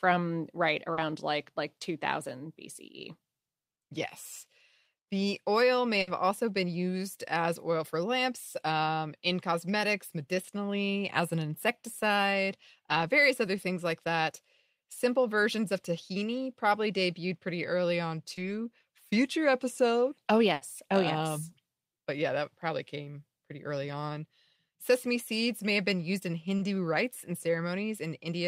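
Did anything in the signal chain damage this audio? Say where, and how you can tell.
Yes. The network stage shows short concealed packet loss at 0.93 s, 18.35 s and 26.57 s. Each is a brief smear or wobble where 40, 20 and 20 ms of speech never arrived, so the receiver stretched the preceding sound and blended back in.

There are two bursts of packet loss, at 6.01 s and 20.53 s, lasting 60 and 80 ms. With consecutive packets gone, the decoder held the last sound while fading it, leaving a sustained buzz or dying hiss. The speech then resumes with that stretch missing.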